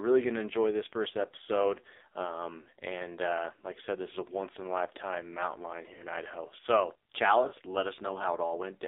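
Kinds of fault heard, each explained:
AMR narrowband mobile codec: The whole clip has that 2G/3G phone sound, squeezed into roughly 300 Hz to 3.7 kHz with nothing above. The speech comes out buzzy and synthetic, heavily mangled in a way that fits a low AMR-NB mode around 5.9 kbps.
Lost AMR speech frames: At 2.62, 5.94 and 7.48 s the speech briefly smears and dips for about 40 ms, which fits two 20 ms frames. The decoder papers over each gap by repeating the last good pitch and vocal tract settings at dropping level.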